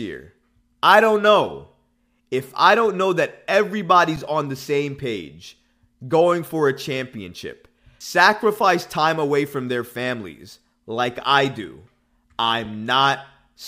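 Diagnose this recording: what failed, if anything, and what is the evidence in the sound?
An underrun with held sample struck the playback buffer twice. At 4.16 s, before "on the same page", the waveform sits flat for 7.3 ms. At 12.65 s it stalls for 5 ms. The converter held its last value. No audio was lost, so each resumes softly.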